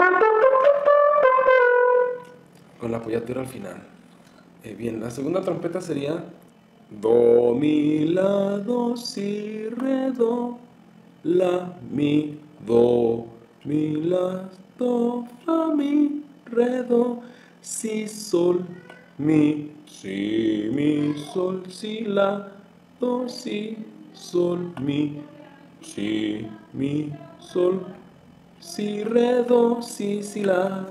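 From start to end, overlap-add ripple: the audio was rebuilt from windowed frames whose overlap doesn't sum to constant gain, so the level dips about 6 dB roughly 40 times a second, once per frame. Unlike irregular dropouts, this rough flutter stays perfectly steady throughout.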